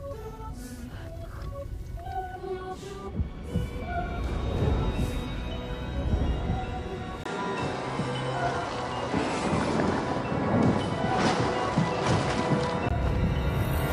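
At 7.24 s a 20 ms gap opens, and until 12.91 s the sound loses everything above 10.5 kHz and gains a new noise floor roughly 30 dB down, with no obvious level jump. The likely cause is the input switching to a poorer device.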